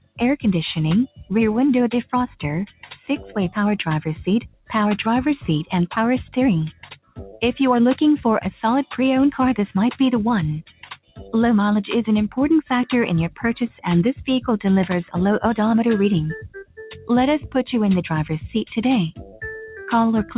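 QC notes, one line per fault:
Throughout: noise suppressor applied to music or sounds. A speech-tuned suppressor is treating sustained parts and tails as noise, so level swings by roughly 10 dB. Attacks get through while held material sinks, giving a pumping, thinned feel over a band that stops near 4 kHz, as the G.711 A-law call path would.
0.0–3.36, 4.41–4.71, 6.73–7.42, 10.69–11.34, 13.3–13.78, 16.43–17.5 and 19.16–19.42 s: sound cut by the noise suppressor. Steady or decaying stretches get ducked hard, about 21 dB at worst in the first, third and fourth spots, about 12–18 dB elsewhere. The affected sound adds up to anywhere from a fraction of a second to about a second in each spot.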